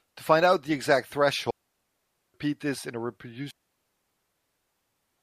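At 1.51 s the speech drops into a digital wireless dropout: the receiver loses too much of the link's data and mutes, leaving a clean hole of near silence until 2.34 s, about 0.84 s long. A second, longer one runs from 3.51 to 4.81 s, 1.3 s. Neither has a noise burst at its edges. On a spectrogram each shows as a blank vertical band across all frequencies; the waveform collapses to a flat line with quick, tidy fades.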